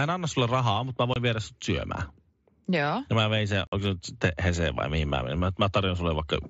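At 1.14 to 1.16 s, between "sulle rahaa mutta mä" and "viedä sut", unconcealed Bluetooth headset packet loss cuts a 22.5 ms hole with hard edges. That fits three lost mSBC frames. At 1.65 s, after "viedä sut", a single sharp click is heard. Dropped samples are the likely cause, with a fraction of a millisecond missing. At 3.67 to 3.73 s, after "mä vein sen", a longer 52.5 ms gap chops the sound abruptly. A second click follows at 3.86 s.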